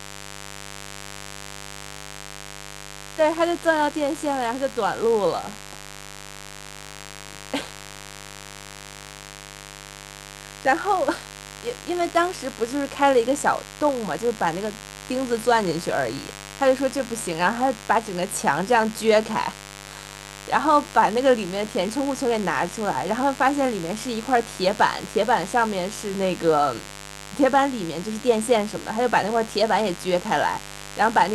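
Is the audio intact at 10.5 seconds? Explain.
No. At 10.5 seconds the speech carries mains buzz, as it does through the whole clip. The hum is based on 50 Hz mains. Sharp switching spikes, likely from a dimmer, rectifier or unshielded cable, enter twice per cycle, so they repeat 100 times a second. Those narrow spikes spread harmonics up to several kHz. The result is a steady, raspy buzz. It sits roughly 15 dB below the speech.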